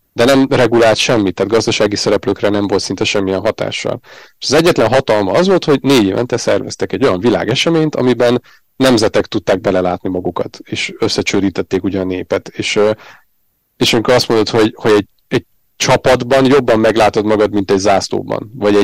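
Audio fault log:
Throughout: hard clipping. The speech drives the signal about 20 dB past what the stage can pass, so roughly a tenth of the samples hit the ceiling and are cut flat. Those squared-off peaks add high harmonics, heard as a harsh fuzz on every loud syllable.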